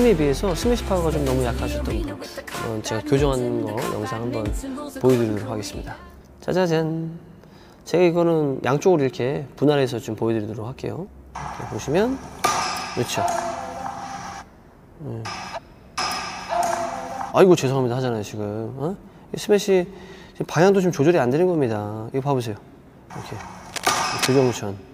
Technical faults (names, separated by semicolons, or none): cable scratch noise